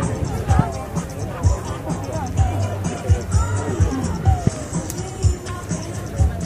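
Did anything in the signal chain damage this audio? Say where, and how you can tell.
Yes. Faint regular ticks run through nearly the whole clip, from 0.1 s to 6.43 s. They come about every 50 ms, roughly twenty a second, so they blur into a soft rattle. They are plainest where the sound is loud and sustained. This points to clock slip clicks at the converter or clock boundary between devices. The likely cause is two free-running clocks about 500 ppm apart, forcing one sample to be dropped or repeated at each slip.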